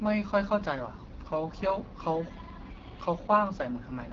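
The speech has passed through an AMR wideband (HD Voice) codec run near the bottom of its bitrate ladder; the damage fits about 8.85 kbit/s. At that rate the pulse-driven vocal tract model has too few bits to rebuild each frame faithfully, so the voice comes out plainly rough and raspy from start to finish. Nothing is present above 7.4 kHz, and the top band is filled with shaped noise rather than real detail.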